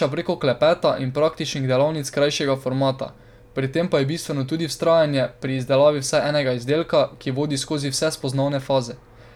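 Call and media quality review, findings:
No faults found on the speech path: the signal stays continuous and within range for the whole clip.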